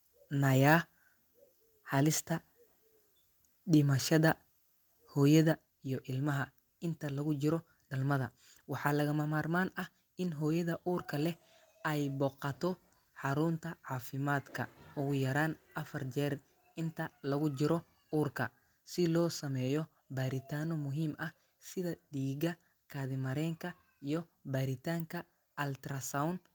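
At 5.52 s the speech and the background beneath it drop together by about 5 dB in a single step, a microphone volume stepped down event. The likely cause is call software lowering the device's input volume after judging the microphone too hot. On a waveform the envelope shrinks abruptly at that instant and stays smaller, and on a spectrogram every band, noise floor included, dims at once along a sharp vertical boundary.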